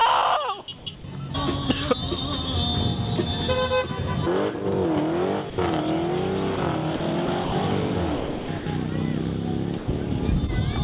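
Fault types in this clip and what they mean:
Comfort noise in place of the background: from 0.78 to 1.04 s the real background turns into a flat, featureless hiss, likely synthetic fill during a transmission pause.
Sound dropped by the voice detector: brief bits of sound vanish into steady noise at 0.96, 5.5, 6.56, 6.96 and 9.78 s, likely mistaken for background.
Sound chopped by the voice detector: 7.26 to 7.52 s and 8.16 to 8.66 s go choppy, likely from the detector toggling.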